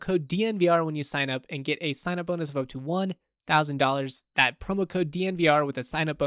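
A short bit of speech, and nothing technically wrong turns up anywhere in it.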